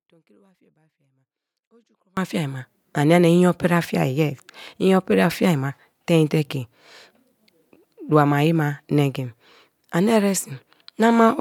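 Right from the start the speech is already gone. Up to 2.17 s there's only a faint trace, roughly 40 dB under normal level, then it snaps back on "fiai ma ania nia". That's an audio dropout to a faint residue, likely a break upstream while the later path stayed live.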